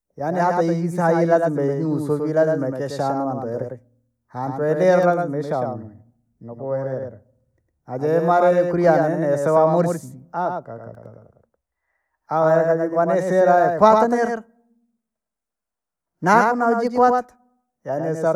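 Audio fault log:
throughout doubled audio track: a full-band copy of the speech trails about a tenth of a second behind, some 5 dB quieter, dry and undecaying unlike an echo, likely from a slower second capture path.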